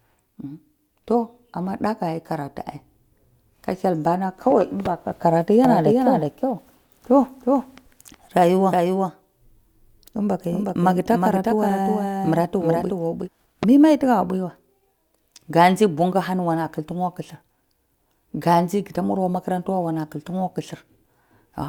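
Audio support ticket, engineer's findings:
Doubled audio track, 5.65 to 13.29 s. Likely a second capture path or an edit leaving two copies offset. Full-band duplicate of the speech trails by roughly 0.4 s, about 5 dB down. Dry, no decay or room colour. Copy cuts in and out abruptly at both ends.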